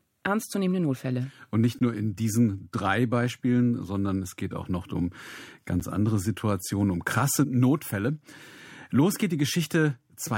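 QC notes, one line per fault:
1.79–1.81 s, gap between stream segments: segment timestamps leave about 18 ms uncovered, so the player inserts hard-edged silence just before "nur in diesen drei", though no audio is lost.
5.80 s, gap between stream segments: a second timestamp mismatch adds about 9.5 ms of silence with abrupt edges. The spacing fits 2-second segments.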